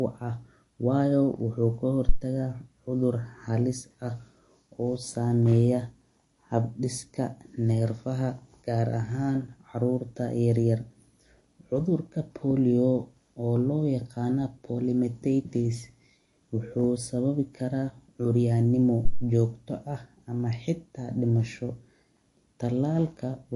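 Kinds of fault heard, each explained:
MP3 compression: The audio was likely squeezed through an MP3 encoder with too few bits to spend, which fits a low bitrate of about 48 kbps. The encoder drops everything above 11.3 kHz, so the treble stops abruptly, and it discards quieter frequency lines that then flicker in and out between frames. Across the whole speech clip this is plainly audible as a watery, swirling texture, with metallic chirps on sibilants and softened consonant attacks.
phantom power thump: A supply voltage was switched on the live microphone input, and that sudden step pushed through the coupling capacitors as a low-frequency pulse. It is heard twice. At 2.09 s, just before "taga cudur halis", a deep thump lasts about 0.07 s and dies away within roughly 17 ms. At 19.05 s, right after "kara curyanimo", a longer one runs about 0.2 s and decays over roughly 44 ms.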